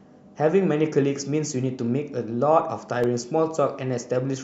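From 2.76 to 3.32 s you get CD scratch ticks, three small clicks spaced evenly across that half second. Something on the disc surface wiped out more data than the error correction could rebuild, and the damaged spot came round once per rotation. Each time, the player had to interpolate or mute the missing samples, so the speech gets a tiny tick, the longest about 0.7 ms.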